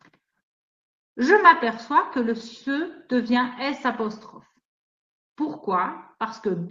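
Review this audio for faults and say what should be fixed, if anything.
No faults turn up in this audio, so nothing needs to be fixed.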